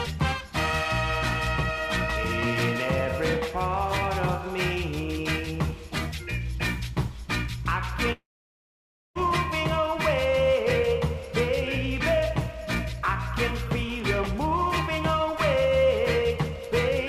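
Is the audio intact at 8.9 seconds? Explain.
No. At 8.9 s the sound is inside a long network dropout running from 8.12 to 9.21 s. Likely a stalled stream: a brief fading buzz carries the last sound, then near-silence. Unlike a short packet glitch, about a second is simply gone when playback resumes.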